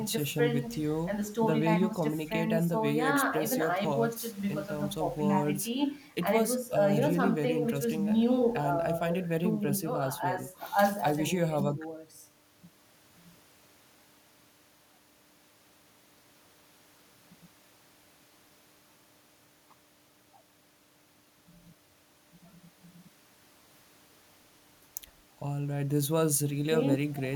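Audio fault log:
No faults detected anywhere in the speech.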